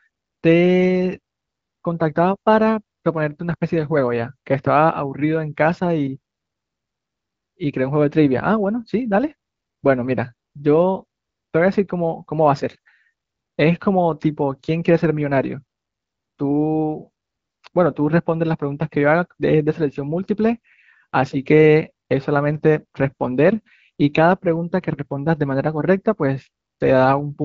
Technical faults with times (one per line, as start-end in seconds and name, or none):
none